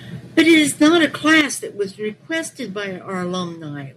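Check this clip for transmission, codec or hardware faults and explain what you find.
Two faults are audible in this speech: sustained clipping early on, and two abrupt drops in recording level.

From 0.38 to 1.41 s there is microphone overload. The loudest peaks carry a harsh, crackling grit, likely because the input was driven about 7 dB past the converter's ceiling, so a few percent of samples are flattened. On the waveform the peaks show squared-off, flat tops. On the spectrogram, smeared broadband energy rises above the normal harmonics on each loud syllable.

The microphone volume stepped down twice, at 0.4 s by about 4 dB and at 1.41 s by about 9 dB. Speech and background sink together in a single instant, with no fade. This is likely the call software cutting the input gain after detecting clipping, and the second, larger cut lands exactly where the distortion ends. On the waveform the envelope drops abruptly at each point, and on the spectrogram the whole frequency range, noise floor included, darkens at once.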